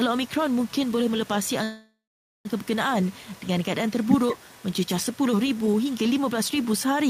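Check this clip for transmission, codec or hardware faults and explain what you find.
Two faults are present: echo leak and a call audio freeze.

Echo leak runs from 0.26 to 2.67 s, 3.03 to 3.48 s, 3.89 to 5.18 s and 5.55 to 6.66 s. A faint copy of the speech trails it by 190 ms, far below the main speech. A loudspeaker echo canceller likely failed to remove it.

A call audio freeze spans 1.63 to 2.47 s. The last sound is stretched into a fading buzz or hiss, then about 460 ms of silence. Speech resumes 816 ms later, with nothing lost. Delayed packets likely emptied the jitter buffer.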